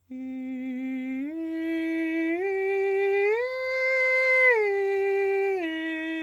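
A music clip with scattered short gaps between about 1.03 and 2.25 s. Roughly ten tiny dropouts, none longer than about 10 ms, land at irregular points through that stretch. Each was patched by extending the preceding sound, about 70 ms of fill in all, or roughly 7% of the span. The result is a run of brief ticks and small smears, and the passage comes out about 15 ms longer, consistent with lost or late packets being concealed at the receiver.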